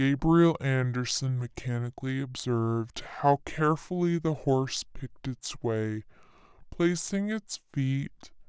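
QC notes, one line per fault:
Throughout: wrong sample rate. The speech runs at 0.67 times normal speed and sits about 7 semitones low, sounding slow and heavy, because the samples play out without conversion, which fits 24 kHz material played back at 16 kHz.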